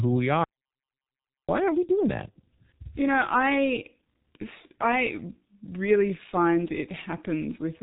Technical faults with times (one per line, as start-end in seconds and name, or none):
0.00-7.83 G.723.1 codec
0.44-1.49 audio dropout to silence